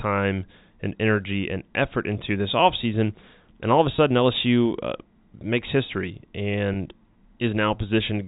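At 3.96 to 3.98 s and again at 6.74 to 6.76 s, packet loss with pitch repetition fills each 20 ms gap, which fits one lost packet, with a repeated pitch cycle. It sounds like a brief buzzy hold, not the silent hole or click of a plain dropout.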